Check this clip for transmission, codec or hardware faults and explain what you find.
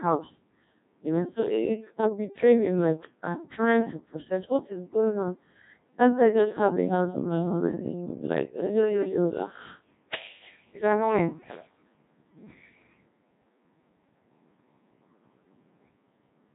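One codec fault is present, and it runs through the whole clip: the speech has passed through a Codec 2 vocoder at heavy damage. Codec 2 doesn't send the waveform. It sends pitch, voicing, energy and a coarse spectral envelope, and the decoder rebuilds the speech from sine waves. The result is robotic and buzzy. The degree of damage fits a rate around 1.6 kbit/s, and nothing is heard above 3.8 kHz. A plain narrowband channel or a waveform codec would dull or smear the same speech, but it would keep the natural grain of the voice. Here that grain is replaced by resynthesis.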